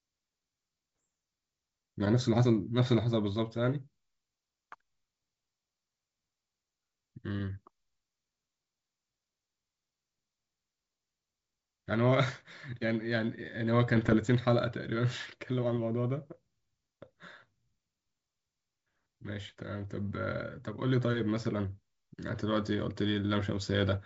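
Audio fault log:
1.00–1.04 s, 13.96–14.16 s, 19.49–19.62 s: bit errors on an ADPCM link. Pops and rough bursts with brief level jumps, at a low error rate of a fraction of a percent, over clean G.722 wideband sound. Unlike a lone click or a dropout, each flipped bit throws the decoder's step size and predictor off, so the disturbance rings on for milliseconds.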